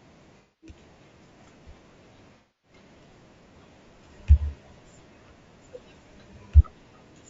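Across the whole speech clip the voice sounds rough and grainy, with a noisy haze between the harmonics and a thin, somewhat synthetic top band. This is low-delay AAC compression, likely AAC-ELD at a bitrate around 32 kbps. Its short frames resolve pitch harmonics poorly, and at this rate there are too few bits to code them cleanly, so the damage is plainly audible.

From 0.38 to 0.74 s there is AAC frame loss with concealment. About 240 ms of audio is missing, which points to roughly eight lost frames. The decoder rebuilds the gap from the last good spectrum, so the speech turns into a smeared, noisy, phasey patch. The same fault returns from 2.36 to 2.75 s, where about 270 ms is concealed, consistent with around nine lost frames, and it has the same blurred, hissy character.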